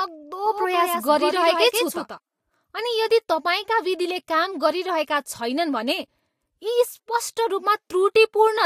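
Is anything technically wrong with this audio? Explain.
Yes. From 0.46 to 2.18 s there's a doubled audio track: a second, full-band copy of the speech trails about 150 ms behind, roughly 5 dB quieter, with no room colour, cutting in and out abruptly. It's likely a slower second capture path or an edit holding two copies out of step.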